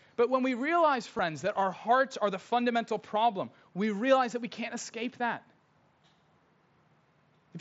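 Concealed Bluetooth headset packet loss at 1.17 s, just after "when we realize": 15 ms of lost audio is filled by repeating the best-matching recent waveform.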